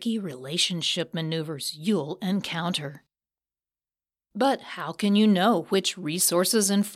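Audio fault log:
No fault is heard in this speech clip.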